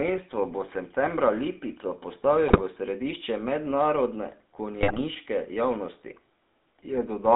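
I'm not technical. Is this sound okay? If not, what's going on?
No. The whole recording has passed through the GSM full-rate codec, the early mobile phone system. It rebuilds speech from a simplified model, so voices sound buzzy and gravelly. The highs are cut off, giving a narrow, phone-like tone.

There are also GSM bit errors, where a weak phone signal corrupted the data. At 2.48 to 2.61 s, just before "v središče mednarodne", and at 4.81 to 5.0 s, just after those words, the speech briefly breaks into squawks, pops and gargling.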